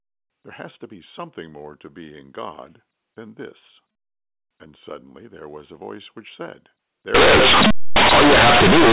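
Companded audio read as linear runs from 7.14 s to 8.92 s, just after "a voice which said". The A-law bytes are played as plain 8-bit samples without expansion, so each sign change swings the waveform across half its range. Quiet and loud moments become equally large, producing harsh buzzy distortion and heavy noise in the pauses.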